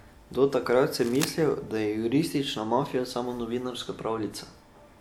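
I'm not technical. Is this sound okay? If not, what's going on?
No, there's a short problem near the start. From about 0.99 to 1.29 s, just before "da je", a burst of scratchy, rustling noise sits on top of the speech for roughly a third of a second. It's fairly loud, not far below the voice itself. This is cable scratch noise, and the likely cause is a worn cable or plug being moved, so the connection kept flickering and spat out that crackle.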